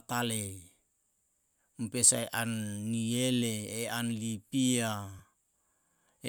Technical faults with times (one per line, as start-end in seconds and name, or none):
5.19 lost LE Audio frames